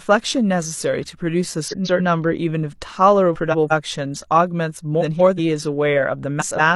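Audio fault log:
1.68–2.01 s, 3.34–3.72 s, 5.00–5.39 s, 6.40–6.76 s: frames out of order. In each stretch, two adjacent blocks of speech play in swapped order, about 139 ms each in the first instance and about 186 ms each in the rest. This fits runs of three or four codec frames decoded out of sequence. The halves play in exchanged order, producing a garbled flutter. No audio is lost.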